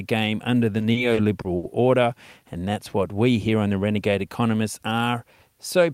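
From 0.79 to 1.66 s the speech hits repeated stalls (stutter): five late-packet gaps, longest 70 ms, filled by stretched sound, so it drags rather than drops out.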